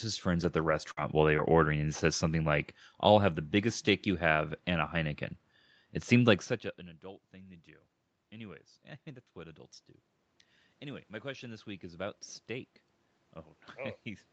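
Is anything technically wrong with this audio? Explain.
Yes, a few things. The opening second and a half takes most of the damage, and the level creeps up later on.

Lost packets rebuilt from error correction hit at 0.43, 0.65, 0.71, 0.87, 0.97, 1.01 and 1.38 s, each about 20 ms. The next packet carried a low-bitrate Opus copy, so there's no gap, just brief rough, noisier patches.

A burst of packet loss runs from 0.91 to 0.99 s. About 55 ms got filled by stretching and fading the last sound into a held buzz or hiss. Roughly 60 ms of real audio is simply missing before things pick up again.

A short concealed packet loss sits around 1.37 to 1.54 s. About 13 ms was patched by continuing the previous sound, roughly 15 ms of timing got added, and 20 ms never arrived. Listen for a quick smear or wobble there.

Automatic gain rising kicks in from 7.65 to 9.67 s. After the input dropped about 22 dB, following the talker moving at around 6.5 s, the AGC eased its gain up about 4 dB, so voice and room noise swell together. 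It climbs again from 10.8 s to the end.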